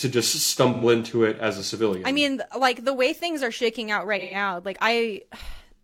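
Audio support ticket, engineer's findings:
AAC frame loss with concealment: smeared, noisy patches at 0.73–0.84 s, just before "into it as a", and 4.19–4.35 s, right after "things are shaking out". Decoder's patching gaps of about 85 and 128 ms, fitting two and three lost frames, from the last good spectrum.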